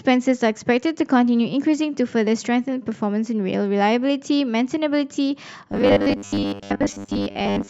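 From 5.72 s to the end of the clip at 7.70 s, the speech turns into robotic sound from repeated short buffers. The likely cause is new audio arriving too seldom, so the same short slice is replayed while the real audio is dropped. Most of what is heard in that stretch is repetition. The repeats impose a fixed 100 Hz buzz, which fits a 10 ms repeated block, giving a rigid, metallic tone that loosely tracks the speech.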